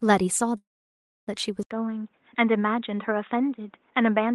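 From 0.57 s to 1.29 s the sound stalls in what is likely a call audio freeze: packets stopped arriving, the jitter buffer drained, and the receiver stretched the last fragment into a brief fading buzz that gives way to about 0.63 s of silence. When delivery resumes the audio picks up exactly where it left off, so roughly 0.7 s has been inserted, nothing is lost, and everything after this point runs about 0.7 s late.

At 1.63 s there is an 80 ms dropout, and from then to the end the sound is duller and boxier, with nothing above 3.8 kHz. Before the switch, the Opus call path carried content up to about 12 kHz. The likely cause is the input switching to a poorer device with a narrower passband. The new input also sits a few dB lower in level and brings its own background noise, about 45 dB below the signal.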